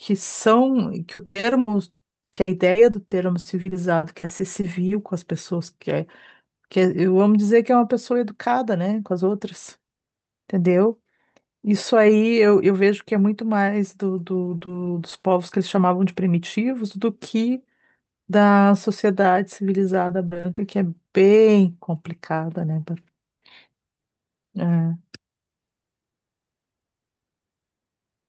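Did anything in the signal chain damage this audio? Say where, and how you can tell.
Yes. The damage happened on the network side of the call, and it shows up in two forms.

Repeated packet loss (robotic sound) runs from 1.13 to 4.91 s. There are 23 gaps, the longest 100 ms, and about a quarter of that stretch is concealed audio. It returns from 20.07 to 20.59 s with 6 gaps of up to 40 ms, covering about a third of that span. Each missing chunk is filled by stretching out the last sound, so the speech turns choppy with pieces missing. On a spectrogram, harmonics freeze into flat, repeated blocks. The waveform shows copied periods where there should be natural variation.

Short concealed packet loss produces four isolated dropouts at 14.57–14.63, 14.65–14.69, 15.09–15.13 and 15.19–15.25 s, each filling 20 to 40 ms. The decoder bridged every hole by continuing the preceding sound and then crossfading back into real audio. 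Each one is heard as a quick smear or wobble. A spectrogram shows a short patch where the harmonics carry on unchanged and then blend back. The waveform has a brief run of repeated cycles. Above these faults, the audio's top end stops near 8 kHz, as expected for the call codec.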